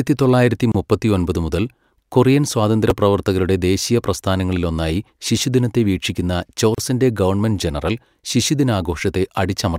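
Speech clip with two kinds of fault. A gap at a join of encoded pieces appears at 0.72–0.75 s, a silence of 27.5 ms just before "മുപ്പത്തിയൊമ്പത് മുതൽ കൊറിയൻ", and again at 6.75–6.78 s, 34.3 ms between "ശിശുദിനത്തെ വീക്ഷിക്കുന്ന" and "ഗവൺമെൻറ് ജനറൽ". The 6.0 s spacing suggests separately encoded segments joined without trimming, leaving encoder delay and last-frame padding as brief dropouts. At 2.90 s, right after "തൊള്ളായിരത്തി മുപ്പത്തിയൊമ്പത് മുതൽ കൊറിയൻ", chunks play out of order. A 5.8 ms chunk arrives one chunk late, so it swaps places with its neighbour. No audio is lost, but the hard joins produce a short jumble.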